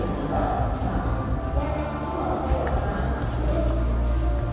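No technical fault can be heard anywhere in this audio; the signal holds steady throughout, with nothing interrupting or degrading it.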